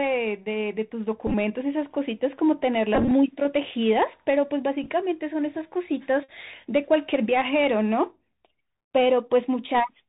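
Throughout, the Bluetooth CVSD headset codec narrows the sound below 4 kHz, which fits a 64 kbps link. Its one-bit steps fall behind, leaving scratchy sibilants and granular hiss.

Bluetooth headset packet repeats come at 1.27–1.34 s, 2.95–3.11 s, 4.83–4.90 s and 6.24–6.29 s. Lost packets were replaced by replayed ones. Where repeats run together they buzz near 267 Hz; a single repeat is only a small tick. The longest, at 2.95 s, loses about 94 ms.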